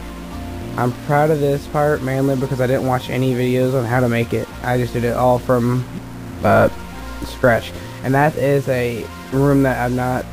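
A stuck bit, likely from a faulty converter, shifts samples by a step of about -35 dBFS throughout the sound, producing harsh buzzy distortion and noise filling the pauses.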